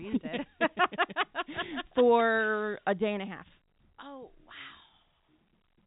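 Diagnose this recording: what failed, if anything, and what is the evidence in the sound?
Nothing failed here; the speech sits in an ordinary telephone band with nothing above about 3.8 kHz, just what G.711 telephone coding carrying it at 64 kbps would give, and no stage in the chain shows any trouble.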